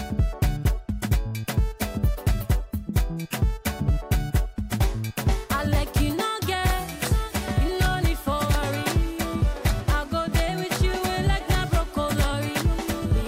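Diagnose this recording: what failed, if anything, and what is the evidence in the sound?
No stage in the chain shows a failure: the signal carries no dropouts, clipping, distortion, noise bursts, timing breaks or level jumps that would point to a problem anywhere from capture to playback.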